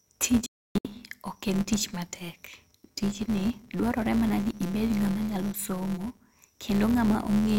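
Running through the whole speech clip is a buzz at 172 Hz from a filter restarted on every block. Each block starts from silence, so every boundary gets a small transient. The repeat rate fits a 256-sample buffer. Unlike mains hum or a steady tone, this buzz rises and falls with the level of the speech, growing louder on loud passages and sinking on quiet ones. It sounds like a ticking texture, not a pure pitch. Between 0.46 and 0.85 s comes a digital broadcast dropout. The receiver lost the signal or rejected corrupt frames and muted. The sound fades out in about 3 ms and breaks into several holes spread over about 384 ms, with the longest gap about 288 ms, which points to around eleven lost frames. It returns just before "ok en tich matek". What separates it from the block-restart fault is true silence with nothing filled in: the material in those gaps is simply gone.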